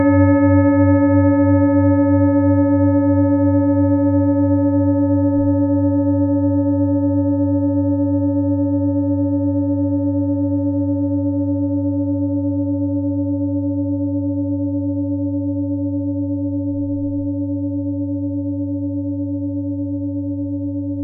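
No technical faults can be heard anywhere in this recording of sounds. Nothing in it stands out to a careful listener as a fault at any point.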